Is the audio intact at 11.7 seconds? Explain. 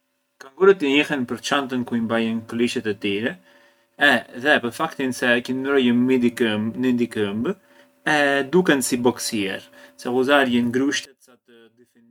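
No. From 11.05 s to the end at 12.10 s, just after "si boksier se ghuzarjën", the speech falls by about 31 dB and turns faint. This is likely one channel inverted, so the shared centre cancels when the channels are summed to mono.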